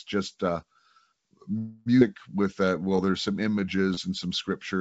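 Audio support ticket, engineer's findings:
Call audio freeze, 1.58–1.88 s: last sound stretched into a fading buzz for 280 ms, then resumes where it stopped with nothing lost. Likely packet delay draining the jitter buffer. Unlike a dropout, no audio is missing.

Skip ahead, 2.00–2.03 s: playback jumps forward almost without a gap. Roughly 150 ms is dropped and the two sides are spliced directly. Jitter buffer discard or loss, not a freeze.

Jitter buffer slow-down, 2.42–3.77 s: audio runs at 90% speed with unchanged pitch and drawn-out sounds, adding 151 ms. Repeated pitch periods rebuild buffer depth. Unlike a freeze, there is no held buzz.

Band limit at 8 kHz fits a wideband call codec such as G.722 on the call path.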